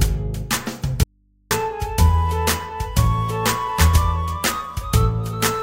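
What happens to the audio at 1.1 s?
An audio dropout to a faint residue runs from 1.03 s to 1.51 s, so 1.1 s falls inside it. For about 0.47 s the sound cuts off abruptly in mid-flow, and the gap holds only a low mains hum, roughly 40 dB below the normal level. The signal was likely lost upstream while the path after the break stayed live, leaving an open input to pick up hum until the sound snaps back.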